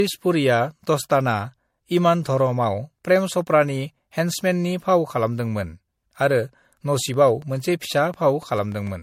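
Throughout the speech there is a swirly, hollow, smeared quality, with blurred attacks and nothing above 16.5 kHz. This is generation loss, likely from repeated MP3 encoding at 64 kbit/s, around four passes, each requantising on a shifted frame grid so the noise and spectral holes accumulate. From 6.99 to 8.88 s a regular train of clicks ticks at about 7 per second, some fifteen pulses of similar shape reaching roughly the level of the speech, likely from interference or a faulty connection or power supply.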